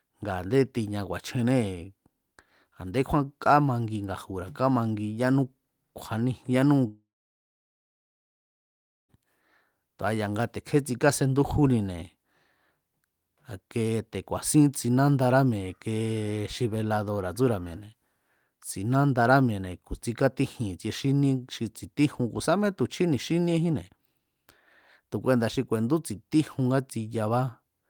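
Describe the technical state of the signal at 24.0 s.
At 24.0 s the speech signal is intact, with no dropout, distortion or other fault to be heard.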